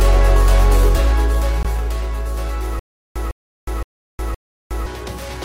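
At 1.63 s the audio drops out for about 19 ms, a gap between stream segments: two segments' timestamps leave a hole that playback fills with digital silence, which fits 2-second segments. On the waveform it is a thin flat-line notch with hard edges; on a spectrogram, a narrow blank vertical stripe. From 2.79 s to 4.86 s comes a stutter with silent gaps: a 155 ms burst plays, then 362 ms of silence, repeating four times every 517 ms. The likely cause is a stalled player replaying its last fragment on each retry, so the audio that belonged to that span is lost. The waveform shows identical blocks separated by flat stretches, and the spectrogram shows the same pattern repeated with empty columns between.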